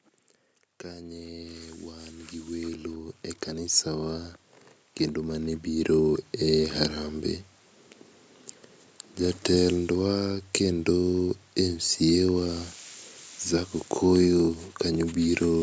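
From 0.84 s to 6.7 s the call's automatic gain control, judging the input too quiet, keeps raising its gain, about 18 dB in total across nearly six seconds. Because the gain acts on everything the microphone picks up, the speech and the background noise swell together rather than the voice alone coming forward. The result is a slow, steady climb in loudness, with the room tone rising along with the talker, all within the call processing's bandwidth, which stops at 8 kHz.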